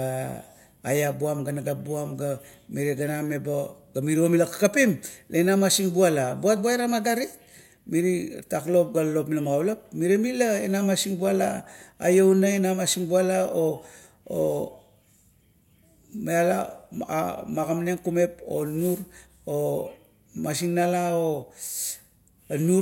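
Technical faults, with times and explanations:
No technical faults are audible.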